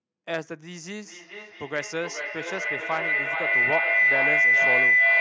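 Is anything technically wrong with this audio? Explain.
Yes. From 1.01 s to the end of the clip there is feedback howl. Two devices on the same call are sharing a room, so the microphone picks up the loudspeaker's output and sends it around the loop again with added gain each pass. The repeats build instead of decaying and narrow to a tone around 2 kHz, with the loop repeating roughly every 0.4 s. At its loudest it sits about 10 dB above the speech, within a band that stops at 8 kHz.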